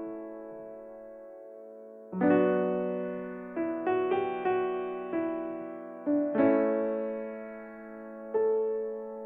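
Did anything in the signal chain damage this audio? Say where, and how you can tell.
No, nothing in the signal chain damaged this music.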